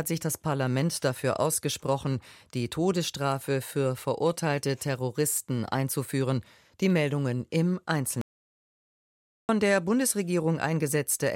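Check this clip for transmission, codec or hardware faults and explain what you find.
One fault stands out: an audio dropout to silence from 8.21 s to 9.49 s, removing about 1.28 s of material. The sound cuts off abruptly mid-flow and resumes just as abruptly, with the gap left silent. The likely cause is a momentary loss of the input, such as a disconnected device, a failed link or an accidental mute, while recording continued. Unlike a natural pause or a noise gate, which leave some room tone or a soft fade, nothing at all remains in this gap.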